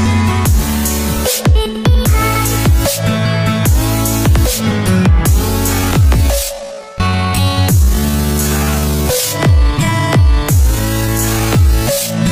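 Time-stretched section from 5.71 s to the end: the pace drops to 0.57x with pitch unchanged, so the audio drags, likely from software repeating short pieces.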